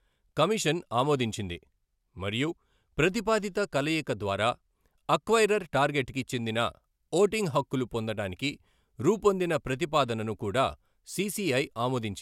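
Speech clip with channel delay (comb filtering) from 0.0 to 6.43 s: one channel runs a single sample or so behind the other, a delay of about 0.02 ms, before the two are summed to mono. The cancellation starts only near 20 kHz, so the effect is a slight dulling of the very top treble rather than an obvious hollowness.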